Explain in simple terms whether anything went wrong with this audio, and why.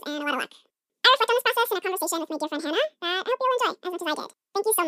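Yes, something went wrong: the audio was read two samples at a time (double speed). The player took each pair of samples as a single step, as if the sound had two channels or wider samples, so the whole clip runs twice as fast and a full octave (12 semitones) higher from start to finish.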